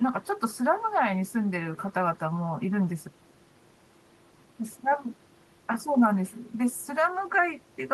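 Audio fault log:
No fault is heard in this speech.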